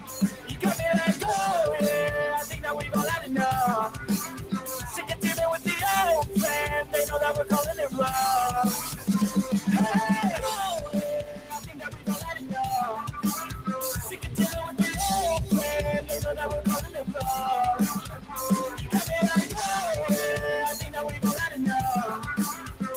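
A noise suppressor meant for speech was left on this sound. It mistakes held tones and decays for noise, so the level pumps by around 10 dB. Sound cut by the noise suppressor sinks at 0.0–0.6, 3.89–4.06, 4.27–4.68, 4.86–5.16, 11.21–12.54, 16.87–17.12, 18.0–18.35 and 22.53–22.76 s. Drops reach about 7 to 10 dB, and about 13 dB at 11.21 s.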